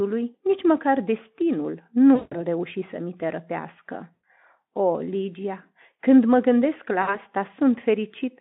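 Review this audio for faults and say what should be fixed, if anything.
VoIP packet loss concealed by the speech codec hits at 2.15–2.37 s, 4.14–4.24 s and 7.01–7.18 s, covering about 160, 100 and 60 ms of lost audio. The decoder repeats its last pitch and filter at falling gain, giving a buzzy tone or coloured noise that fades and stays weak into resumed speech. On a spectrogram it appears as frozen, evenly spaced harmonics. On the waveform it shows as a decaying, overly regular envelope. Forward error correction and a deeper jitter buffer on the link would prevent these dropouts.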